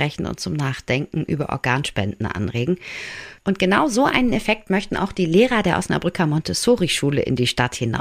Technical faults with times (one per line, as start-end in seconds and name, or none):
none